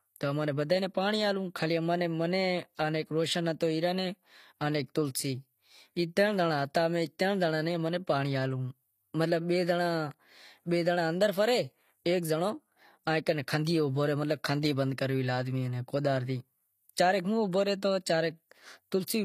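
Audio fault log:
Throughout: HE-AAC compression. The speech's s sounds come out gritty and metallic, with nothing above about 14.9 kHz. This is likely HE-AAC rebuilding the treble from copied lower bands, so its harmonics no longer match, at a rate that points to roughly 24 kbps.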